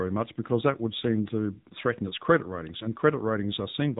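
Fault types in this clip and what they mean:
AMR narrowband mobile codec: the speech runs through a phone-style coder that models the vocal tract, so nothing above 3.8 kHz survives. The damage is plainly audible, fitting a low mode around 7.4 kbps.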